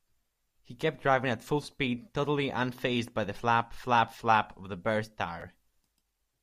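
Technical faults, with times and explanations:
5.40–5.42 s, chunks out of order: two 10 ms pieces of the speech play in swapped order. The earlier chunk arrives one chunk late, after the chunk that should follow it. No audio is lost. The sequence is simply wrong. The waveform breaks at three hard joins inside those 20 ms. Each join snaps between unrelated sample values. So the listener hears a brief jumbled blip near the end of the clip.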